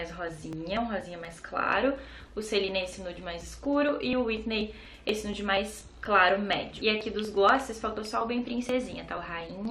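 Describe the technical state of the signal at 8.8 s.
At 8.8 s the signal sits within periodic USB or driver dropouts running from 0.29 to 9.65 s: roughly 10 ms skipped every 0.24 s, heard as evenly spaced ticks, unlike irregular network glitches.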